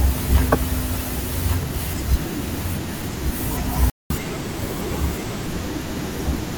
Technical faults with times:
0.00-6.57 doubled audio track
3.90-4.10 playback stall
4.10-5.46 catch-up at higher speed

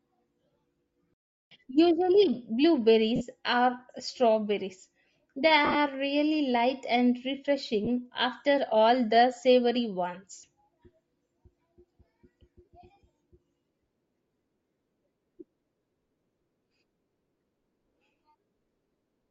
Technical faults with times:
0.00-19.30 Bluetooth LC3 compression
1.14-1.51 playback stall
3.16-3.22 lost LE Audio frames
5.65-5.76 lost LE Audio frames
7.85-7.88 lost LE Audio frames
12.65-12.68 lost LE Audio frames

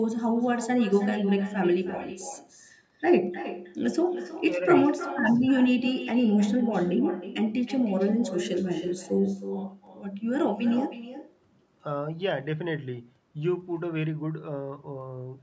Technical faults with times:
0.00-15.43 echo with no canceller

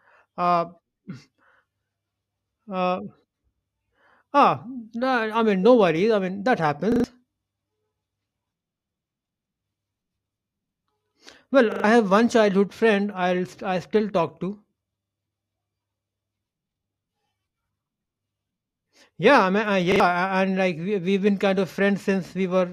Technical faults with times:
6.92-7.04 repeated buffer
11.72-11.84 repeated buffer
15.04-15.12 repeated buffer
19.92-20.00 repeated buffer

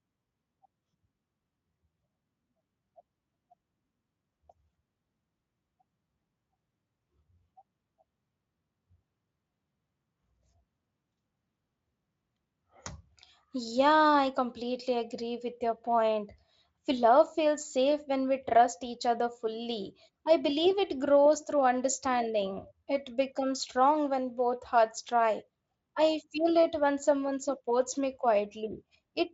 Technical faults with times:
none

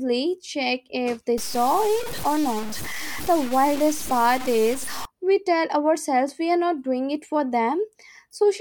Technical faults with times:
1.38-5.05 low bit depth without dither

